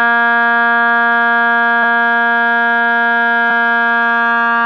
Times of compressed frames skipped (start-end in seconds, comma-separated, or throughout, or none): 1.82, 3.50